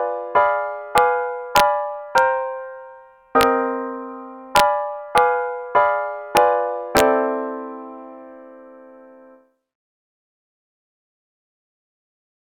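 Integer overflow cracks occur at 0.98, 1.56 to 1.60, 2.18, 3.41, 4.56 to 4.60, 5.18, 6.37 and 6.97 to 7.00 s, where peaks exceeding full scale by up to about 3 dB wrap to the opposite sign, producing sharp, violent snaps.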